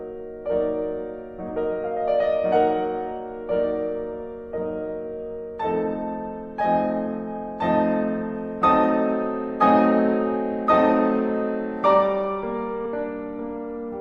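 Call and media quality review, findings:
Compressed frames skipped, 9.59–9.63 s, in the music: about 20 ms of audio jumps ahead. Decoder is discarding missing or damaged frames. The audio skips forward rather than leaving a dropout's silent gap.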